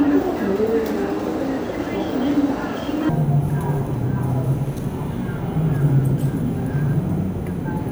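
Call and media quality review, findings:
Stereo read as mono, 3.09 s to end (7.9 s). Sound drops to half speed and an octave low (-12 semitones). Probable component: decoder or capture path misreading the channel layout, consuming interleaved left/right samples as one mono stream. Spectrogram: content compressed into the lower half, fainter mirrored copy in the upper half. Waveform: events stretched to double length from 3.09 s.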